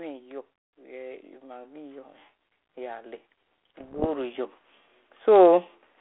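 From 3.80 to 4.07 s the speech breaks into pops and a rough, gritty burst with brief jumps in level. These are bit errors on an ADPCM link: roughly half a percent of flipped bits knock the decoder's step size and prediction off track, so each error rings on for milliseconds.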